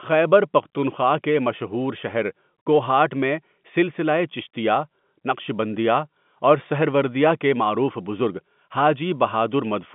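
No faults to report: the speech sits in a 150 Hz to 3.5 kHz telephone band with nothing above 3.8 kHz, as expected of G.711 mu-law coding at 64 kbps, and any coding damage is faint at most.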